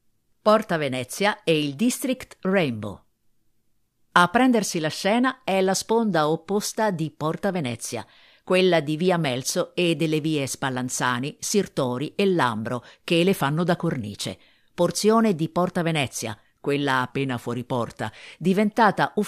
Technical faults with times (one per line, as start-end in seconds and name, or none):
13.41-13.92 drift correction step
17.10-18.33 drift correction step